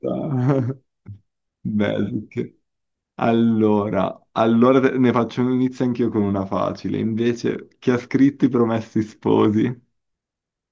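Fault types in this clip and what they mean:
No fault types are present in this clip.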